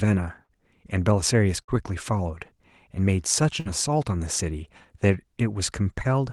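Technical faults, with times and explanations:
0.43–0.52 s, 1.63–1.71 s, 3.60–3.68 s: burst of packet loss. Each time the receiver stretches the last sound for about 50 ms and fades it, then skips ahead about 60 ms.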